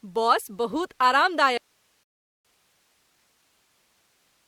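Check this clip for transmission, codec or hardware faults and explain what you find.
Two faults are present, and they overlap in this speech clip.

From 1.58 s to the end, an audio dropout to a faint residue occurs: the wanted signal was likely lost upstream while the path after the break stayed live. The speech cuts out abruptly, leaving only hiss about 40 dB below the normal signal level.

From 2.03 s to 2.45 s, a rebuffering stall occurs: the player ran out of downloaded audio and halted until more arrived. Playback drops to silence inside the hissing gap, then resumes exactly where it stopped, adding about 0.41 s without losing any material.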